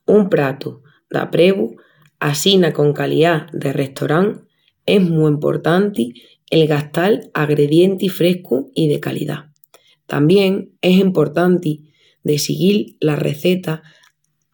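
Listening to the speech here, nothing stood out as a technical problem at any point.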